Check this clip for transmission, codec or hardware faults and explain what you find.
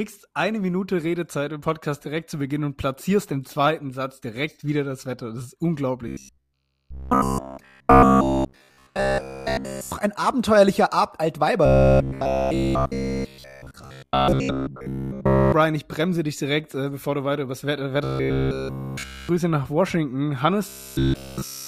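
There is one fault, robotic sound from repeated short buffers, heard from 6.08 to 9.92 s, 11.66 to 15.52 s, 18.04 to 19.29 s and 20.69 s to the end. In each stretch the sound becomes a rigid metallic buzz at 66.7 Hz that follows the original only roughly. The likely cause is a starved playback stage looping the last 15 ms block, whose period fixes that buzz pitch.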